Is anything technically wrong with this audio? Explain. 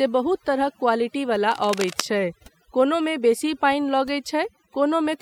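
Yes, there are two problems. Overdone noise removal runs through the whole speech clip. The noise reduction has been pushed so hard that any frequency band sitting close to the estimated noise floor is pulled down almost to nothing, and the quieter parts of the voice are stripped out along with it. The gaps between phrases fall to near silence scattered with small twinkling, chirpy specks. On a spectrogram this appears as a blotchy, moth-eaten texture. Isolated bright dots are scattered over a dark background, and the upper harmonics break up into fragments.

From 1.51 to 2.02 s, just before "छै कोनोमे बेसी", there is cable scratch noise. It is likely caused by a worn cable, connector or control being moved, so that its contact resistance fluctuates rapidly. The result is a dense, irregular burst of scratching and rustling on top of the speech, at roughly 10 dB below it. In the waveform it appears as jagged, uneven spikes riding on the signal. 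On a spectrogram it is a ragged broadband smear covering that half-second.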